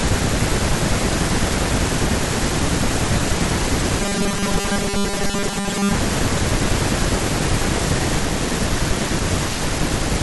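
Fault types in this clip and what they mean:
Robotic sound from repeated short buffers: from 4.00 to 5.94 s speech becomes a rigid metallic buzz fixed at 200 Hz, likely from a 5 ms chunk replayed while audio arrives late. Spectrograms show flat harmonics every 200 Hz; the waveform shows roughly repeating cycles over about 70% of the span.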